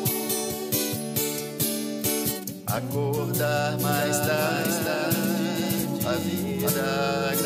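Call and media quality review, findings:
Doubled audio track, 3.83 to 6.69 s: full-band copy about half a second behind, roughly 5 dB down, starting and stopping abruptly; likely a second capture path mixed in out of step.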